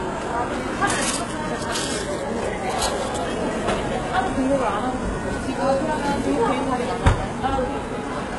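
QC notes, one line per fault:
throughout: HE-AAC compression, heavy damage. Treble sounds gritty and metallic, with harmonics misaligned across the crossover. The likely cause is band replication rebuilding the top from copied lower bands, fitting roughly 12 kbps. The spectrogram shows a hard ceiling at 11.5 kHz and blocky, repeated texture above the crossover.
0.50–7.82 s: clock drift buffer slips. About seven regular clicks arrive every 1.22 s, likely from mismatched device clocks running roughly 0.1% apart, so a few dozen samples are dropped or repeated each time. The waveform shows step discontinuities, and the spectrogram shows vertical broadband lines.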